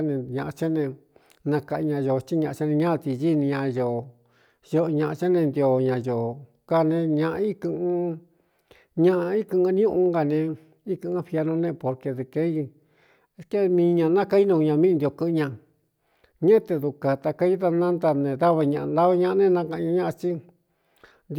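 Speech recording; no technical faults audible anywhere in it.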